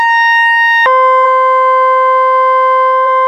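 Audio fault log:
0.86 s to the end: section at the wrong speed. From here the music suddenly plays at 0.56 times its proper rate, so everything drops by about ten semitones and drags, with pitch and tempo falling together. The likely cause is the audio being played or resampled against the wrong clock. Unlike a deliberate pitch shift or time stretch, neither property is preserved, and the change arrives as one step rather than a gradual drift.
1.21 s and 3.02 s: damaged data in a compressed stream. Each is a brief fault, about 14 ms long, where the decoder misreads corrupted frames, loses sync and jumps to the next valid frame header, often skipping a sliver of music. A click or dropout is a single sharp tick or a clean silence. These are short decoding errors.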